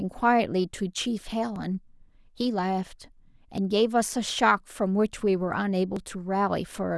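Three sharp clicks cut through the speech, at 1.56 s, 3.58 s and 5.96 s, each a single tick with nothing audibly missing around it. They're most likely dropped samples: a tiny chunk, around a millisecond or two, vanishes from the stream, so the waveform leaps straight from one value to a later one. That discontinuity is what you hear as the click, and on a spectrogram each shows up as a thin vertical line.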